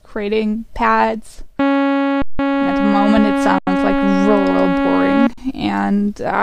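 At 2.22 to 2.39 s, 3.58 to 3.67 s and 5.33 to 5.38 s, the sound briefly freezes into a flat, silent hold of 170 ms, 85 ms and 43 ms, then resumes softly where it stopped. This is an underrun with held sample: the output buffer ran dry and the converter held its last value until data arrived. Each halving of the gap fits 8192-, 4096- and 2048-sample stalls at 48 kHz.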